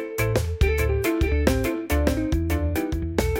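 Every event in the audio is followed by a second, identical copy arriving roughly 0.7 s later and about 5 dB quieter, for the whole clip. The repeat carries the full frequency range with no reverberant tail or room colouring, so it sounds like a flat, out-of-step echo. This is a doubled audio track, likely caused by the signal being captured twice through a slower second path, or by an edit that layers two offset copies.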